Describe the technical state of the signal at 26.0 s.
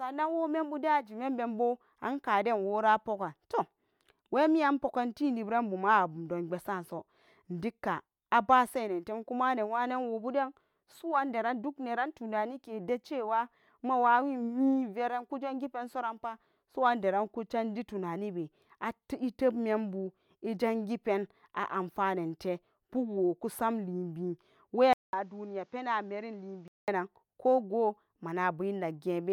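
At 26.0 s the speech sits in a dull stretch from 24.93 to 26.88 s, between "pen a'anfanente pukwo kusmalibi" and "ko go". Nothing passes above 7.6 kHz, the level drops by about 5 dB, and a new background noise appears. This is likely an input switched to a poorer device. The 200 ms silence at the switch and the added noise set it apart from a simple filter.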